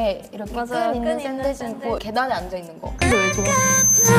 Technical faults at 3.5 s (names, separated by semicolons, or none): loudspeaker feedback squeal